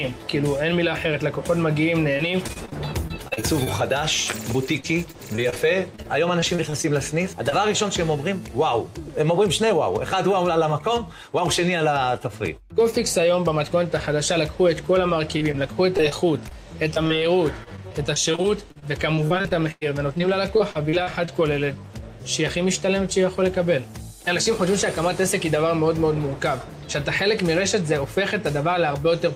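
Choppy stretches with pieces missing break up the audio at 2.17–3.68 s, 4.80–6.86 s and 15.37–21.29 s. This is repeated packet loss: holes up to 36 ms, and 99 ms in the last stretch, keep arriving, each patched by extending the previous sound, so about 11–15% of each stretch is filled in. At 7.50–7.53 s a brief smear or wobble marks a short concealed packet loss, where a few hundredths of a second never arrived and the receiver bridged the hole by continuing the preceding sound before blending back.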